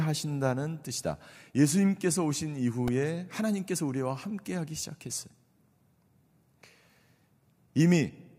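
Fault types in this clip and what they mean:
Repeated buffer: a brief buzzy click at 2.88 s, where the device replayed a roughly 1.3 ms piece several times because new audio arrived late.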